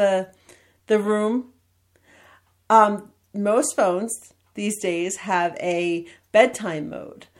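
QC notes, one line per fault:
No audible faults detected in the speech; nothing to log.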